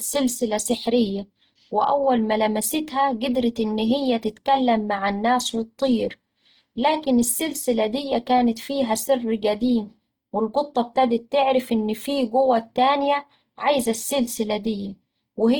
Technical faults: Opus compression

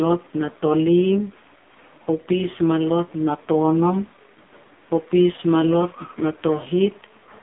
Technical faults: AMR narrowband mobile codec

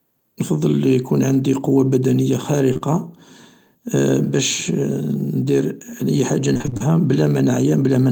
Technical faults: short concealed packet loss; repeated packet loss (robotic sound)

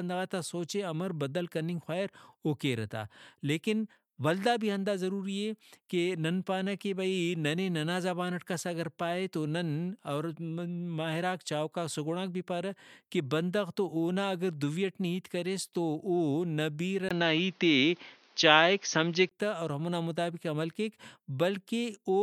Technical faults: input switched to a poorer device

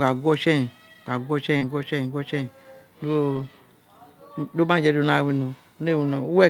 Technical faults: short concealed packet loss; lost packet rebuilt from error correction

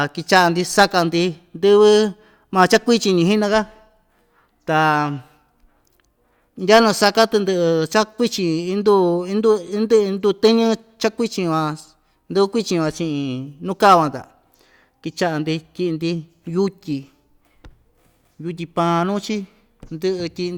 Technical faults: none

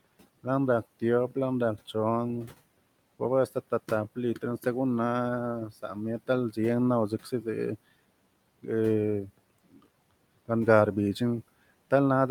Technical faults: speech cut by the noise suppressor

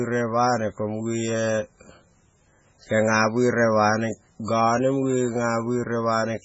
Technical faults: MP3 compression

